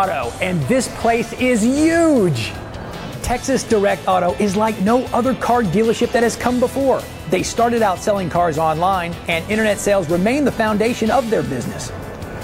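No technical faults can be heard anywhere in the clip. There is nothing in the audio that calls for comment on technical grounds.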